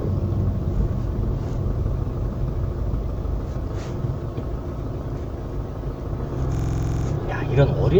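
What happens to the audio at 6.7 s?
A system hang loop runs from 6.55 to 7.06 s: the driver stalled and the hardware replayed one 46.4 ms buffer eleven times, a machine-gun stutter at 21.5 Hz.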